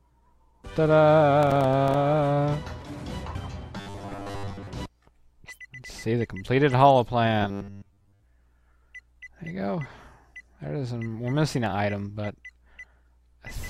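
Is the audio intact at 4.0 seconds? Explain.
No. Robotic sound from repeated short buffers runs from 3.77 to 4.67 s, covering the 4.0 s point. The likely cause is new audio arriving too seldom, with the playback filling the gaps by replaying a 10 ms slice while the real audio is skipped. For most of that stretch, the repeats impose a fixed 100 Hz buzz, giving a rigid, metallic tone that only loosely follows the underlying sound.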